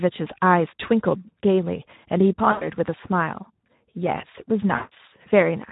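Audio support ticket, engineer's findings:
Speex codec throughout: hoarse, noisy speech consistent with Speex at about 11 kbps; too few excitation bits for clean CELP reconstruction. Spectrogram shows smeared harmonics.

VoIP packet loss concealed by the speech codec at 2.51–2.71 s (about 100 ms) and 4.75–4.92 s (about 160 ms): decoder extrapolates last pitch/filter, so there is a buzzy tone or coloured noise that fades, with a weak recovery. On the waveform, a decaying envelope.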